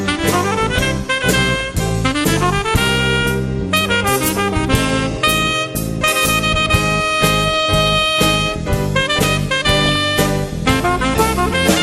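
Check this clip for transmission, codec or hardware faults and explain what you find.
Two faults are audible: constant codec damage across the whole clip, and two short bursts of reception errors on top of it.

MP2 compression runs throughout. The sound is dull and carries a granular, gurgling roughness, most likely from MPEG Layer II coding at a rate that fits about 80 kbps. With that few bits, the upper sub-bands are switched off and the remaining ones are coarsely quantised, so high frequencies flicker in and out. Unlike burbling, this damage is steady and present everywhere rather than arriving in bursts.

DAB burbling occurs from 5.11 to 5.30 s and again from 9.78 to 9.96 s. Each burst is under a fifth of a second of burbling. Weak reception lets a small fraction of bits, a few in a thousand, slip past error correction into the MP2 data. The corrupted samples put short blips of noise in single sub-bands, and corrupted scale factors make individual sub-bands leap in level for up to a frame. 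That frame-by-frame jumping is what separates it from the steady dullness of low-rate coding.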